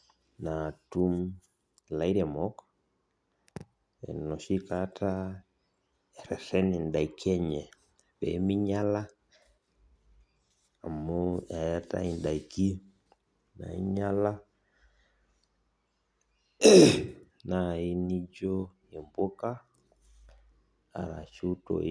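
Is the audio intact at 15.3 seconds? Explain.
Yes, the audio is intact at 15.3 seconds, with no fault audible at that moment.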